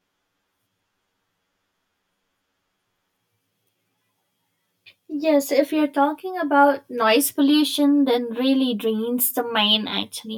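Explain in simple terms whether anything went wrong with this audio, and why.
Throughout the speech, one channel runs about 10 milliseconds behind the other, and combining them causes channel delay (comb filtering). Sound cancels at evenly spaced pitches starting near 50 Hz, leaving it hollow and phasey. Unlike room echo, nothing lingers afterward.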